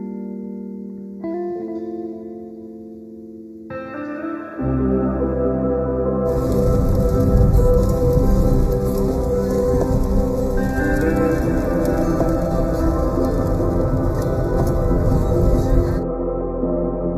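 Throughout the clip, one channel runs slightly behind the other, by well under a millisecond (roughly 0.15 ms), and the two are then mixed to mono. That small offset causes channel delay (comb filtering): material common to both channels cancels at regularly spaced frequencies, the first around 3 kHz and the next around 9 kHz. The sound comes across as hollow and slightly phasey, with a fixed, dulled gap in the upper midrange that never moves.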